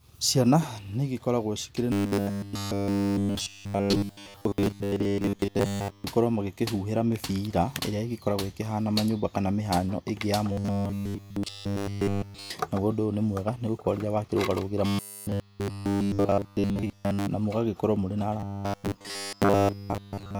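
A speech clip with robotic sound from repeated short buffers at 1.92–6.04, 10.52–12.51, 14.86–17.27 and 18.40–20.40 s. The voice turns into a rigid 100 Hz metallic buzz, which fits a 10 ms buffer likely being replayed while real audio is skipped. It is heaviest in the middle two stretches.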